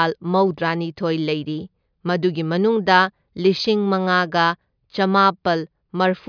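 No technical faults turn up anywhere in this speech recording. No moment stands out from the surrounding audio, so there is nothing to place on the timeline.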